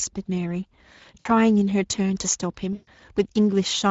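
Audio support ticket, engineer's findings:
Speex codec damage, whole clip: plainly audible hoarse, noisy grain on the speech. A CELP coder is starving the excitation of bits, which fits a mid-rate Speex mode near 16.8 kbps. The grain is constant, unlike bursty network damage.

VoIP packet loss concealed by the speech codec, 1.19 to 1.28 s and 2.73 to 2.89 s (about 60 ms, then 140 ms): the speech smears into a fading buzzy tone or coloured noise as the decoder extrapolates its last pitch and filter. Unlike plain dropouts, the gap is filled by extrapolated sound.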